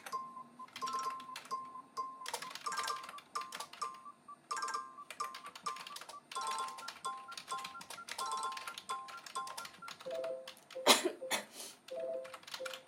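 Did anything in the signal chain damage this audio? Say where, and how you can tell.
No, nothing in the signal chain audibly damaged these sounds, and the signal holds steady throughout with no stage leaving a mark on it.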